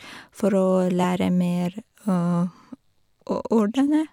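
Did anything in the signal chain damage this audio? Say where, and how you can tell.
Yes. The codec stage dropped compressed frames: at 3.30 s the speech jumps ahead by about 20 ms. A spectrogram shows a thin vertical discontinuity where the harmonic tracks shift abruptly.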